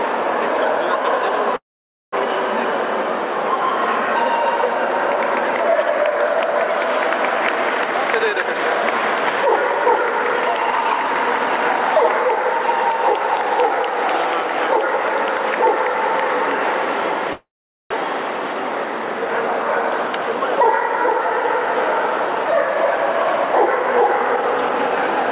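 A call audio freeze runs from 1.56 to 2.14 s. The last sound carries on briefly as a fading buzz and then drops to silence for about half a second before the audio resumes where it stopped. Nothing is lost, but a gap of about 0.56 s has been inserted. This likely comes from delayed packets emptying the jitter buffer. A jitter buffer speed-up follows from 7.87 to 9.37 s at 114% speed, removing roughly a fifth of a second. A second speed-up runs from 9.78 to 13.70 s at 108%, removing about 0.3 s. In both, the receiver cuts out short pitch-period slices one after another to shrink an overfull buffer, so the sound runs hurried while its pitch stays the same. A second freeze at 17.33 to 17.92 s behaves like the first: a short fading tail, then silence of about 0.44 s, adding roughly 0.58 s of delay. A final speed-up from 22.28 to 25.31 s at 115% removes about half a second and is the most noticeably rushed. 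Throughout, nothing above 4 kHz is present, which fits a narrowband call codec such as G.711 mu-law.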